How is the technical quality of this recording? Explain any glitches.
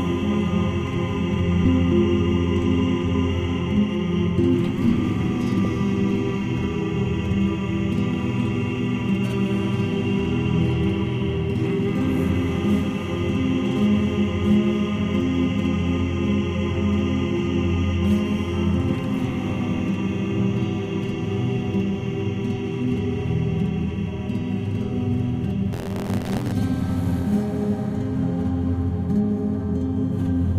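The recording has two audible glitches.

At 5.65 s, compressed frames are skipped. About two 32 ms frames never reach the output, so the audio jumps ahead by roughly 70 ms. It is heard as a brief jump at the join.

From 25.72 to 26.53 s, buffer tearing occurs. Writer and reader have slipped within the ring buffer. A small slice of each period replays audio roughly 40 ms old, with hard joins on both sides. This gives a rattling buzz near 86.1 Hz, which fits a 512-sample buffer.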